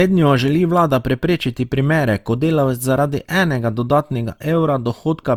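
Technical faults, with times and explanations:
Throughout: generation loss. The speech has a swirling, smeared and hollow quality, with consonant attacks blurred and soft, more degraded than a single encode at this quality would leave it. The likely cause is repeated lossy coding, with the character pointing to Opus at around 64 kbit/s applied about three times. Each pass requantises on a shifted frame grid, so noise piles up, even though content still reaches about 20.2 kHz.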